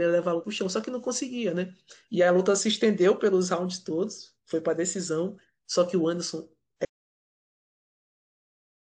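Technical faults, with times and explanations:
0.40 to 0.44 s, compressed frames skipped: the speech jumps forward here because a few whole coded frames never made it to playback, either missing from the file or thrown out by the decoder as damaged. With frames of 46.4 ms, the jump is about three frames, so roughly 150 ms of material just isn't there.
6.85 s to the end, audio dropout to silence: the speech cuts off mid-flow and what follows is dead digital silence, not even room tone, right through to the end of the clip. That points to the input going away while the recorder kept writing silence, most likely a disconnected device, a failed link or an accidental mute. Whatever came after that point is simply gone.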